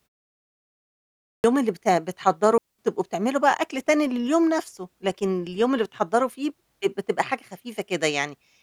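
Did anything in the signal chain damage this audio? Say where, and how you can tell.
Yes. At playback, the output device shows a clipped start after a pause: after 0.95 s of silence, roughly half a second of speech, from 0.95 to 1.44 s, is swallowed while the device wakes. On the waveform, sound appears abruptly at 1.44 s, with no onset.

A digital wireless dropout also occurs in the transmission link: from 2.58 to 2.79 s the receiver mutes for 210 ms after losing too much data. The waveform shows a clean flat gap, and the spectrogram a blank vertical band with no noise bursts at either edge.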